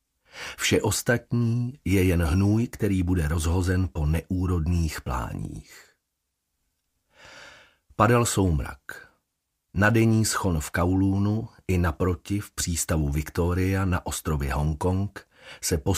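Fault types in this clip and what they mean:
Nothing stood out on listening that would count as a technical fault.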